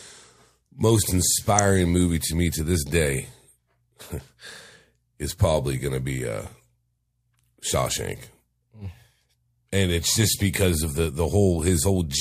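A louder blip at 1.59 s, just before "movie to me to", and a quieter burst from 11.71 to 11.73 s are corrupt frame decoded faults: damaged compressed frames, roughly one and then a few, were played anyway, throwing energy onto wrong frequencies.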